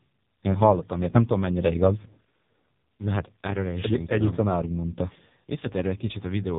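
Speech here, and it's been squeezed through the AMR narrowband mobile codec for its whole length. There's nothing above about 3.8 kHz, so the sound is thin and boxed-in, and the heavy damage gives it a buzzy, synthetic edge. The codec rebuilds the voice from a vocal-tract model fed by sparse pulses, and this much smearing fits one of AMR-NB's lowest modes, around 5.15 kbps.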